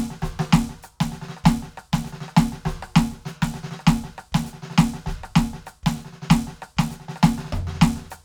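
The music comes through with no technical faults audible anywhere in the signal.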